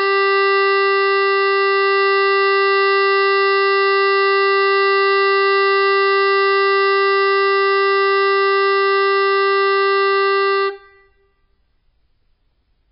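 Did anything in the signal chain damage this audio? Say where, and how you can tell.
Yes. The damage sits at the codec stage and runs through the whole music clip. Nothing survives above 5.4 kHz, and the band below is heavily damaged, watery and swirling, with attacks smeared. That points to MP3 compression at a very low rate, around 16 kbps, with the encoder cutting the treble and dropping weak spectral lines frame by frame, most likely. A plain low-pass filter or analogue roll-off would dull the top without that shifting, bubbling texture.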